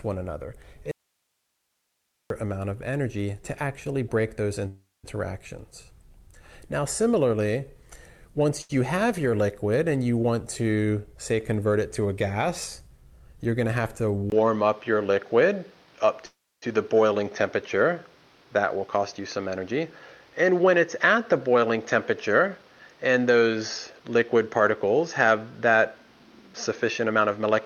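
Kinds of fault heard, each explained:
Audio dropout to a faint residue: from 0.91 to 2.30 s the sound cuts abruptly to hiss far below its level, likely a lost signal with a live path; spectrogram shows a faint noise band.
Call audio freeze: at 4.67 s and 16.26 s the last sound is held as a decaying buzz, then silence, for about 0.36 s each, likely late packets; waveform shows a smeared tail before a flat gap.
Short stall from a late packet: at 8.62 s a sound is stretched by 78 ms before resuming unchanged; spectrogram shows a briefly frozen, repeated texture with a slight dip.
Jitter buffer speed-up: at 12.82–13.47, 18.37–22.66, 23.35–24.01 and 26.49–27.46 s the audio runs 7 to 23% faster at unchanged pitch; waveform cycles appear compressed, with no visible gaps.
Input switched to a poorer device: from 14.3 s, after a 20 ms silence, the sound turns duller, with nothing above 6.5 kHz, a level change of about 5 dB and a new noise floor about 35 dB down, likely a different microphone.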